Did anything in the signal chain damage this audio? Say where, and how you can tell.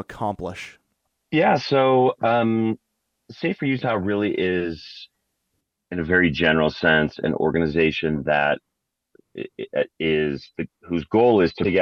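Yes. At 11.61 to 11.67 s there is a brief glitch from damaged data in the compressed stream. Corrupted frames made the decoder misread its input and resynchronise.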